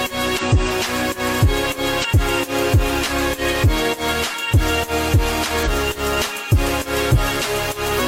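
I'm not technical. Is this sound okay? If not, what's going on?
No. This is damaged data in a compressed stream: some stored bits were corrupted, so the player briefly loses its place and has to find where it can resume. That causes short blips at 0.38–0.43, 2.00–2.05, 5.62–5.68 and 7.94–8.00 seconds.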